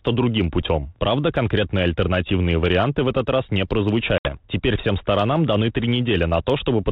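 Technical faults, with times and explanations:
4.18–4.35 s, packet loss on an ADPCM call: about 70 ms of the stream went missing, which fits roughly seven 10 ms packets, and the gap was filled with silence, so the speech cuts out with a hard edge. During the hole the decoder's adaptive predictor and step size drift away from the sender's, so when speech resumes it comes back slightly distorted, settling within some tens of milliseconds as the 32 kbit/s G.726 decoder re-converges.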